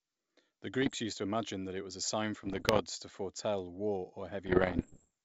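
Pops and rough, gritty bursts with brief jumps in level break into the speech three times: from 0.82 to 0.95 s, from 2.44 to 2.82 s, and from 4.46 to 5.10 s, each longer and denser than the last. These are bit errors on an ADPCM link, at roughly one to two percent of bits. Each flipped bit throws off the decoder's step size and predictor, so the damage rings on for milliseconds. The G.722 wideband coding carrying the speech stays clear up to about 7 kHz.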